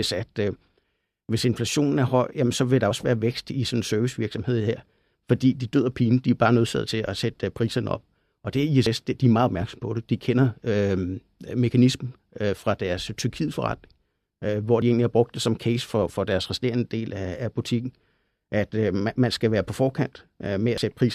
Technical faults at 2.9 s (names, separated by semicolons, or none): audio missing between chunks